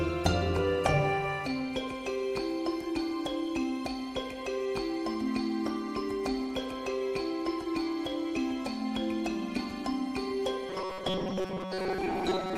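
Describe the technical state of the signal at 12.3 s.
At 12.3 s the sound has robotic sound from repeated short buffers, running from 10.69 s to the end at 12.57 s: a rigid metallic buzz at 188 Hz. The likely cause is starved input, with roughly 5.3 ms segments looped for most of the time. Unlike flanging, the pitch stays fixed rather than sweeping.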